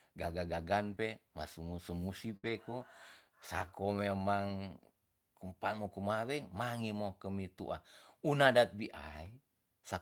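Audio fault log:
0.91 s, 2.45–2.51 s, 3.61 s and 8.43 s: lost packet rebuilt from error correction. At each point a packet failed to arrive, but the next one carried a low-bitrate copy and the decoder played it, so there is no gap. Each rebuilt stretch is 20 ms, and 40 ms at 2.45 s where two consecutive packets were lost. These moments sound rougher and grainier than the surrounding speech.
0.95–0.99 s: short concealed packet loss. About 20 ms of speech never reached the decoder in time, and it had no redundant copy. The receiver extended the preceding sound for roughly 12 ms before blending back into real audio. This produces a brief smear or wobble just after the 0.91 s repair, and a short consonant in that window can be lost.
2.37–2.45 s: burst of packet loss. About 60 ms of consecutive audio was lost or arrived too late to play. The receiver continued the last sound for about 64 ms while fading it down, so a voiced sound turns into a held buzz and an unvoiced one into a decaying hiss. 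Playback then resumes further along with the intervening speech missing, and the error-corrected frames at 2.45 s follow directly.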